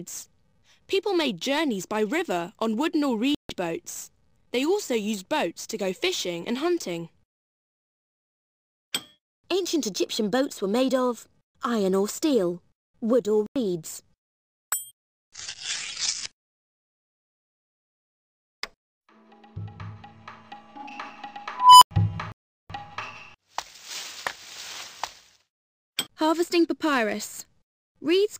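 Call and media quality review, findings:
Dropouts to silence at 3.35 s (0.15 s), 13.46 s (0.09 s) and 22.32 s (0.38 s), audio resuming where it stopped. Likely Bluetooth stall: interference delayed packets, the headphone buffer ran dry, playback paused until retransmissions arrived.

Squeal near 1 kHz at 21.54 to 21.91 s, swelling over 0.28 s to clipping, then 0.09 s of silence. Unstable filter: recursive filter with bad coefficients, output grew unbounded, overflowed and muted until reset.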